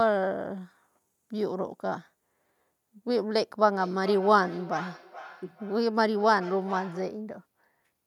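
Feedback echo between two devices runs from 3.64 to 7.32 s. A second device in the room replays the call, and this microphone picks it up again, beyond its own echo canceller's reach. The speech returns roughly every 0.4 seconds, thinner and ringing, peaking about 16 dB below the speech.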